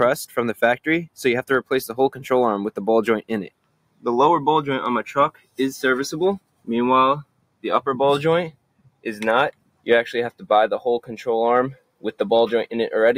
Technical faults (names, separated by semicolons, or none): noise suppressor applied to music or sounds; sound cut by the noise suppressor